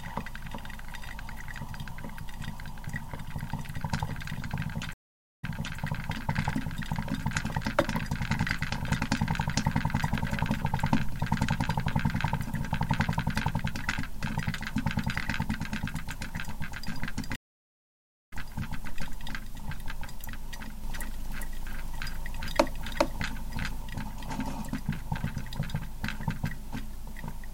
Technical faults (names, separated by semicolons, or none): stream reconnect; doubled audio track